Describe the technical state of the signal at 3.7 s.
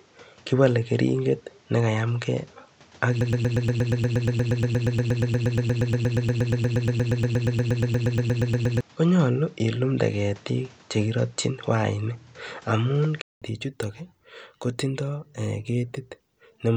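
At 3.7 s you're hearing two problems stacked. Up to 13.42 s the input sounds like a poorer device: nothing above 8.1 kHz, so it's dull and boxy, with a noise floor about 30 dB down. It's likely a switched microphone or headset call profile, and the better input returns after a 200 ms gap and a level change of around 5 dB.

On top of that, a broken-record loop runs from 3.21 s to 8.81 s. A 118 ms fragment repeats back to back about 47 times, likely because the player or stream stalled and kept resending its last chunk, so the audio that belonged in those seconds is gone.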